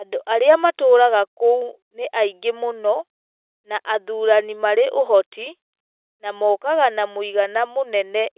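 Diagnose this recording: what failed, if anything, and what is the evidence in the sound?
Nothing has failed here; the speech simply carries the narrow telephone-band character of mu-law G.711 coding at 8 kHz, with nothing above 4 kHz, which is exactly what that format is meant to sound like.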